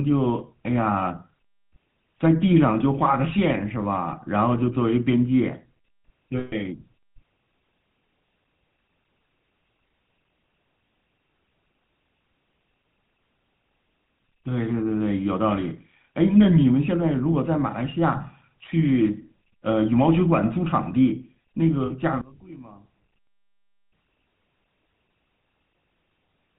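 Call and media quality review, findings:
GSM full-rate codec, whole clip: band-limited speech, nothing above 4 kHz, plainly audible buzzy, gravelly roughness. Consistent with a 13 kbps full-rate coder: vocal-tract filter driven by regular pulse excitation that keeps only every third sample, which leaves the grainy texture.

Lost GSM frames, 6.38–6.78 s and 21.86–21.91 s: held metallic ring where the decoder repeats the last good frame's settings. The first gap suggests about 140 ms of missing audio, the second about 40 ms.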